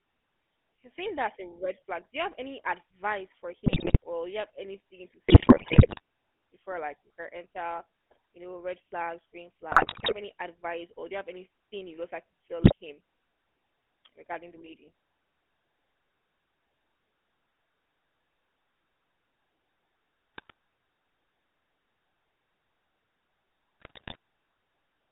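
Speech carried over a GSM full-rate codec for its whole length, with audible codec damage. The line is confined to roughly 250 Hz to 3.4 kHz, and the voice has the buzzy, gravelly texture of a regular-pulse excitation feeding a vocal-tract model that keeps only a fraction of the excitation samples, which fits a 13 kbps full-rate stream. On top of that are GSM bit errors, where corrupted filter, pitch or gain parameters reach the decoder and distort or overdrive individual frames, heard as squawks, pops and gargling. They occur at 3.66 to 3.97 s, after "have any advice for" and before "or you have anything"; at 5.28 to 6.00 s, the longest burst, after "you have anything to" and before "before like we can"; at 9.72 to 10.13 s, after "know red flags green" and before "any advice or do"; and at 12.62 to 12.73 s, 20.35 to 20.52 s, and 23.80 to 24.16 s.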